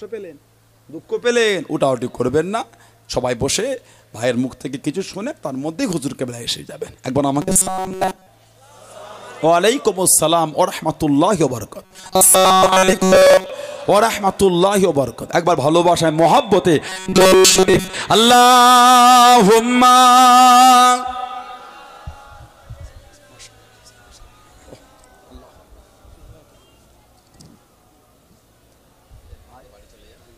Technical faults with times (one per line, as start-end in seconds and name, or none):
7.42-8.27 robotic sound from repeated short buffers
11.85-13.51 robotic sound from repeated short buffers
16.89-17.96 robotic sound from repeated short buffers